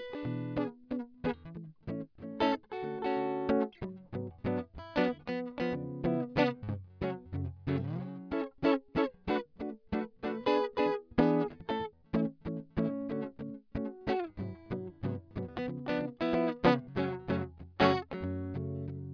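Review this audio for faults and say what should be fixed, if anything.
Nothing in this music stood out on listening, so there is nothing here that needs fixing.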